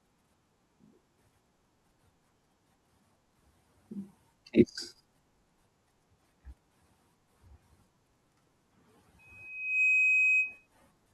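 At 9.19 s a loudspeaker feedback squeal begins and lasts until 10.67 s. A microphone is picking up the loudspeaker it feeds. At about 2.5 kHz the loop gain rises above one, so that frequency feeds on itself. It swells from nothing in under a second. It settles into a piercing steady whistle, roughly 15 dB louder than the speech. It stops at 10.67 s.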